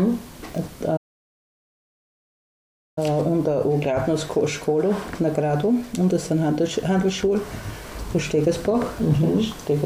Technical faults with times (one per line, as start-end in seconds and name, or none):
0.96-2.98 playback stall